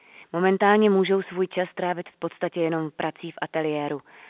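No technical faults are audible.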